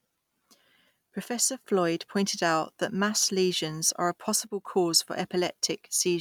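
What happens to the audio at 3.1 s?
Nothing goes wrong at 3.1 s; the speech runs through that moment intact, with no dropout, glitch or other fault.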